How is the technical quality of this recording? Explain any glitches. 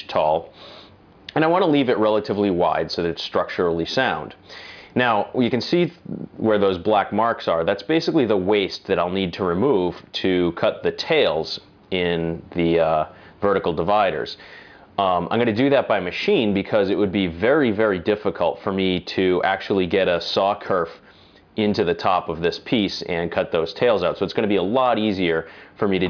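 No glitches can be heard anywhere in the recording; the signal stays continuous and stable throughout, with no audible technical faults.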